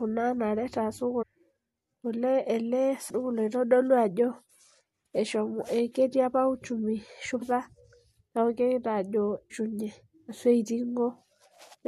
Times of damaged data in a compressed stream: 1.21-1.23, 3.09, 7.41, 9.50, 11.73-11.75

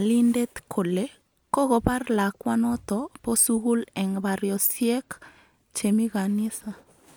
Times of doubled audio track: none

